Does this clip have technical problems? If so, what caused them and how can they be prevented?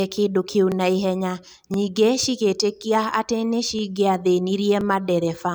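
Yes. Overlapping chunks cause a brief stutter at 0.72, 1.74, 2.76, 3.79 and 4.81 s. The audio was handled in one-second chunks, each starting 23 ms before the previous one ended, so that slice plays twice. Aligning chunk boundaries exactly, without overlap, prevents it.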